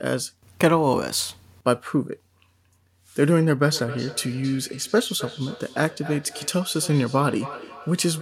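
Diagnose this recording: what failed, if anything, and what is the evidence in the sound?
Call processing failed: feedback echo between two devices from 3.7 s onward. Speech recurs roughly every 0.3 s at about 15 dB down, a loop neither echo canceller can remove.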